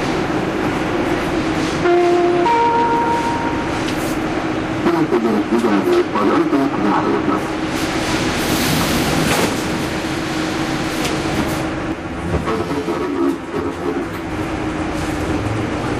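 From 11.92 to 14.31 s the audio turns hollow and phasey from channel delay (comb filtering): one channel runs roughly 10 ms late, and summing to mono cancels shared content at evenly spaced frequencies, cutting fixed notches starting near 40 Hz.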